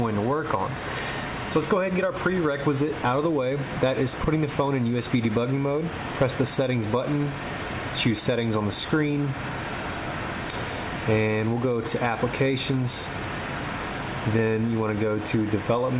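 No technical faults can be heard in this audio.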